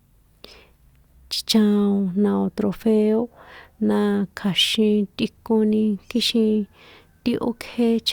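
A short recording of speech, with no technical fault audible anywhere in it. Nothing in the audio calls for a time or a cause to be noted.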